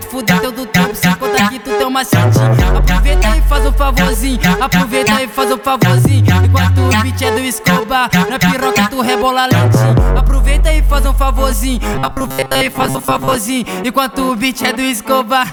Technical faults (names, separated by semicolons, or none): robotic sound from repeated short buffers